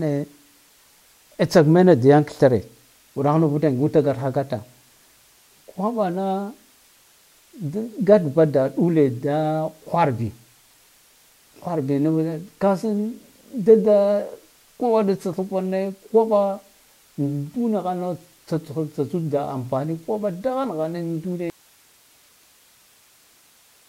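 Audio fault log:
21.5 s to end: audio dropout to a faint residue; speech cuts abruptly to hiss about 35 dB down and never returns, likely signal loss with the path still live.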